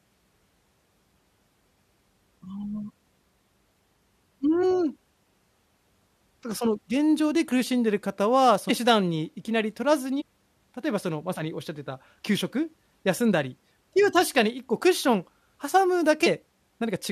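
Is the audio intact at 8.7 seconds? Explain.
No. At 8.69 s the compressed speech stream carries damaged data: part of the encoded stream is wrong, so the decoder cannot read the frame at that point, loses its lock on the frame structure and has to search for the next valid frame header before it can continue. The result is a short burst of garbled output lasting under 20 ms, heard as a brief chirp or blip cutting into the speech.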